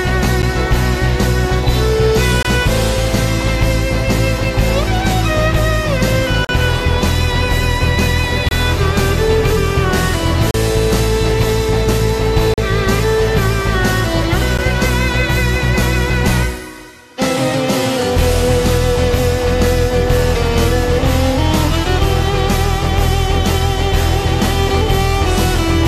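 Short holes of silence with hard edges cut into the sound at 0.42 s, 2.43 to 2.45 s, 6.45 to 6.49 s, 8.49 to 8.51 s, 10.51 to 10.54 s, 12.54 to 12.58 s and 14.58 s, lasting from about 9 ms to 44 ms. This is a gap between stream segments: the time stamps of consecutive 2-second segments leave space, and the player fills it with silence, hence the roughly 2-second spacing. Unlike a dropout from lost data, nothing is skipped; the audio resumes exactly where it stopped.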